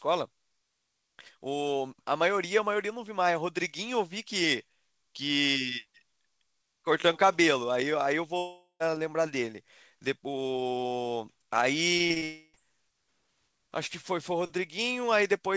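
At 8.38 s the sound gives way to a fading buzz that runs to 8.82 s, with the last stretch of about 110 ms near silent. That's most likely a long network dropout: roughly 420 ms never arrived, so the receiver stretched the last sound and then ran out, and the audio resumes without the lost part.

From 11.98 to 12.24 s you get repeated packet loss, the robotic sound: four short holes, the longest 37 ms, patched by repeating the last sound, so about 38% of that span is filler and it comes out choppy with pieces missing.

Right after, from 12.24 to 12.55 s, there's another likely long network dropout. About 300 ms is missing, covered almost entirely by a smeared continuation with only a brief silent moment before the sound returns.

Throughout, the audio has nothing above 8 kHz, which fits a wideband call codec like G.722 at 64 kbps.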